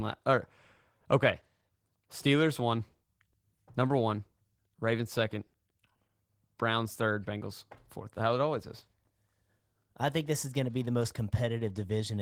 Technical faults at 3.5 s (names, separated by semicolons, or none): Opus voice compression